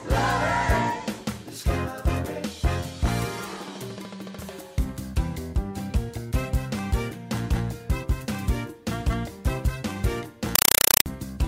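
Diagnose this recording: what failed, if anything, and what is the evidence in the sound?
The playback link failed: from 10.55 to 11.06 s the sound gives way to loud, chattering static, a compressed stream played as audio. Roughly 4 ms noise bursts repeat 31.25 times a second, which fits an undecoded AC-3 stream being treated as plain PCM samples.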